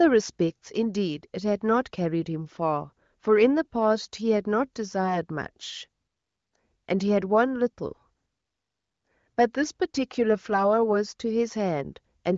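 No technical faults are audible.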